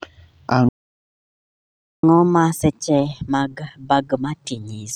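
Playback stall, 0.69 to 2.03 s: the speech goes silent mid-flow for 1.34 s, likely because the player ran out of buffered data or its thread was blocked. Catch-up at higher speed follows from 2.03 s to the end, as the backlog is resampled to play 1.25 times faster, raising pitch by roughly four semitones to regain lost time.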